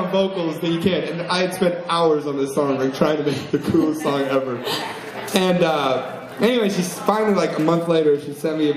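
From 0 to 4.0 s the player starts on a low-bitrate version of the adaptive stream and only steps up once it has gauged the connection. The opening sounds dull, with nothing above 14.4 kHz and stronger codec artefacts, fitting roughly 40 kbit/s MP3. At 4.0 s the quality jumps to a fuller sound, consistent with about 128 kbit/s, without any gap.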